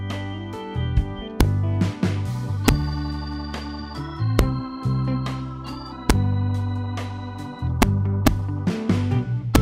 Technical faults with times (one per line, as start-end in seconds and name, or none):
1.41 integer overflow
2.68 integer overflow
4.39 integer overflow
6.10 integer overflow
7.82 integer overflow
8.27 integer overflow
9.55 integer overflow